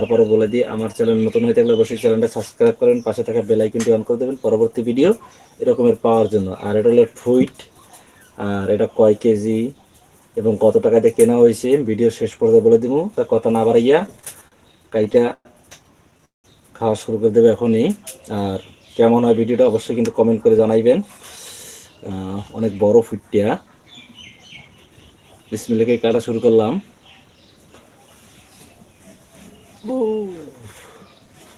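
From 13.99 to 15.47 s there's a run of repeated stalls, a stutter. The jitter buffer kept running dry because packets were trickling in late, so the receiver stretched the last bit of sound to cover each hole: 13 little hitches, 282 ms filled in total, the longest 115 ms. That's about 19% of the stretch being concealment, so it drags and catches rather than losing anything.

Then at 16.25 s you get a short call audio freeze lasting about 190 ms. The sound hangs on its last moment, then drops into roughly 160 ms of silence before picking up exactly where it left off. The likely cause is packets getting held up in transit and the buffer emptying, so the receiver added a gap of about 190 ms to the playback delay. Nothing is missing; it's just a pause that wasn't there before.

After that come two jitter buffer speed-ups, from 19.60 to 20.98 s at about 108% speed, and from 21.96 to 22.67 s at about 112%. 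In each, the receiver trims a backlog of roughly a tenth of a second by snipping out tiny pitch-period-sized slices over and over. The pitch stays put, but the sound runs noticeably quicker and a bit rushed, more so in the second, shorter burst.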